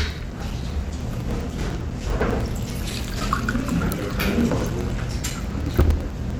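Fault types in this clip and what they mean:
Periodic USB or driver dropouts: a background task stalls the USB bus or audio driver every 0.1 s, and each stall drops about 4 ms of audio that is replaced by silence. From 0.10 s to 6.31 s this produces a steady train of roughly seventy short gaps, heard as evenly spaced ticks at ten per second. They stand out wherever the sound carries energy and fade into it wherever it is quiet.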